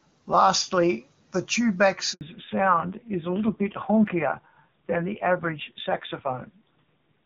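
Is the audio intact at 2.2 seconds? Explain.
No. The sound cuts to silence from 2.13 to 2.21 s, an 80 ms hole falling right across 2.2 seconds. This is a handover gap: while the call moved between networks, no speech frames arrived, so whatever was said in that moment is lost.

From 2.21 s onward the audio is also audibly duller and rougher, with nothing above 4 kHz. That is a fallback to narrowband. Before the gap the call ran on the AMR wideband (HD Voice) codec, clear at a rate near 24 kbit/s. The harsh, band-limited quality after it fits a low-rate narrowband AMR mode around 6 kbit/s.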